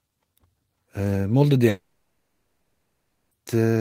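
A long network dropout likely stopped audio arriving from 1.69 to 3.33 s, so 1.62 s of speech was never played. The receiver extended the last sound into a fading buzz, leaving 0.49 s of silence before speech returns without the lost part.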